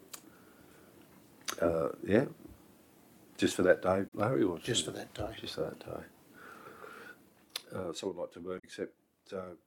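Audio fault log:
4.05–4.13 s and 8.56–8.65 s: damaged data in a compressed stream. Each is a brief glitch lasting under a tenth of a second. Corrupted bytes make the decoder misread frames, lose sync and hunt for the next header.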